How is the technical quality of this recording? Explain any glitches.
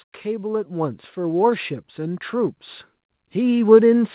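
The recording has two level swells caused by automatic gain rising. From 0.22 to 2.63 s, and again from 3.2 s to the end, the call's gain control judged the input too quiet and raised it gradually, by about 8 dB in the first instance. The voice and background noise grow louder together. On a waveform the envelope ramps steadily upward, and on a spectrogram every band brightens at once. The audio stops at 4 kHz, as expected for a narrowband telephone-style call path.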